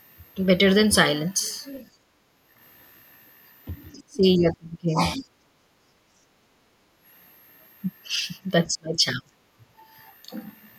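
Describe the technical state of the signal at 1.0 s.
A thin, high whistle sits under the speech at 1.0 s, wandering between about 11.4 and 13.7 kHz, around 35 dB below it. This switching supply whistle runs throughout, from a power supply chattering in an audible burst mode or beating with another one.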